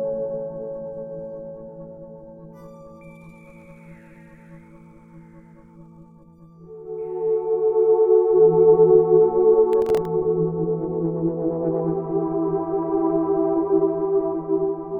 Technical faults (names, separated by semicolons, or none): processor overload crackle